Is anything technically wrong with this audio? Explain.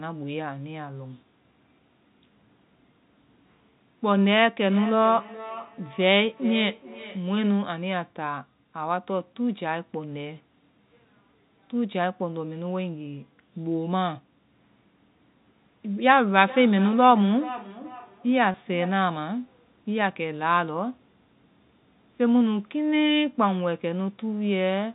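Yes, two kinds of trouble, both on top of what sounds like ordinary telephone-band audio topping out around 4 kHz.

Feedback echo between two devices shows up from 4.7 to 7.63 s and again from 16.26 to 19.07 s. A second device in the room is replaying the call into an open mic, and since each echo canceller only handles its own playback, the sound comes back roughly every 400 ms, thinner and ringier, at about −15 dB and −14 dB.

Packet loss with pitch repetition hits at 18.52 to 18.54 s, inside that second echo stretch. About 20 ms went missing, which fits a single lost packet, and the receiver filled the gap by repeating the last pitch cycle, so you get a brief held, buzzy blip.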